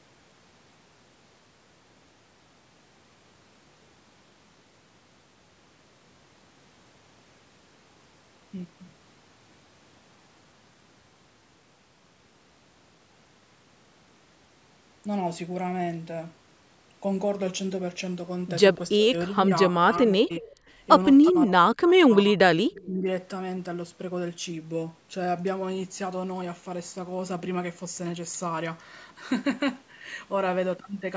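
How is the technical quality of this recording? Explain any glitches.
The recording has trouble between about 19 and 23 seconds, where two call-processing faults alternate.

Speech suppressed in double talk occurs from 18.97 to 20.46 s, 21.32 to 22.39 s and 22.86 to 23.07 s. The voice sinks by roughly 15 dB, then as much as 40 dB, then about 10 dB. When both sides spoke at once, the echo canceller likely could not separate talker from echo and turned everything down. Unlike a network dropout, the voice dips and returns in pieces rather than stopping cleanly.

Echo leak appears in three brief scraps at 20.46 to 20.55 s, 21.24 to 21.33 s and 22.72 to 22.86 s. Each is a faint copy of the voice trailing it by 350 ms, ranging from very quiet to moderately quiet. Loudspeaker sound likely slipped past the loudspeaker side's canceller and was sent back. The fixed delay and weak level distinguish it from room reverberation.

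Throughout, the audio carries nothing above 8 kHz, which is consistent with the call's band limit.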